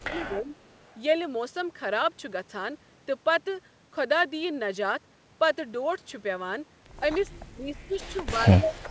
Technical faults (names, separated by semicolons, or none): speech suppressed in double talk; echo leak